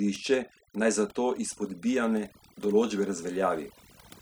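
From start to finish, the background drops to an unnatural near-silence broken up by twinkling, warbling specks. This is overdone noise removal. A noise reduction stage was pushed too hard, cutting individual frequency bands deep or away entirely whenever they came close to its noise estimate. The softer parts of the voice fell below that threshold and were stripped along with the noise, leaving isolated surviving bands that flicker as those specks.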